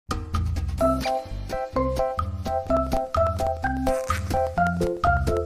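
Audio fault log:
2.67–5.37 s: periodic USB or driver dropouts, regular ticks every 0.1 s where roughly a millisecond of signal drops to silence, pointing to a recurring bus or driver stall.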